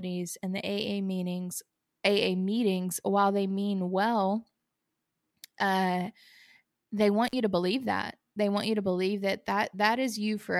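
At 7.27 to 7.33 s, just before "you to believe that", the speech shows an intermittent contact: a loose connection briefly opens the signal path. The audio drops out for about 48 ms, leaving faint hiss, with short crackles as the contact breaks and remakes.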